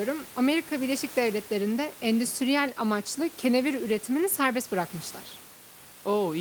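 No technical faults can be heard in the speech, and the only background is the room's own noise, sitting about 22 dB below the voice as part of the original recording.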